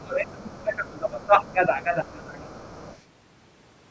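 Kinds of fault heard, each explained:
Speech suppressed in double talk: from the very start until about 2.65 s the talker's voice keeps sinking and thinning out, dropping by roughly 20 dB at its deepest. It's likely the echo canceller ducking everything because both ends were talking at once and it couldn't pull them apart.
Other side's voice leaking through: faint scraps of a second voice slip in at 0.43–0.76 s, 1.44–1.52 s and 2.64–3.02 s, sitting about 30 dB under the talker and closer to about 25 dB in the last one. Likely loudspeaker playback the echo canceller didn't fully remove from the mic.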